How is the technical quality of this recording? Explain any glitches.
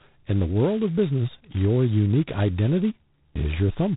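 The recording is heavily degraded throughout. The damage is G.726 ADPCM coding at a very low rate. Each sample is coded as a prediction error, with too few bits. That leaves a harsh, rasping hiss tracking the speech level, which fits 16 kbit/s. Nothing passes above 3.9 kHz.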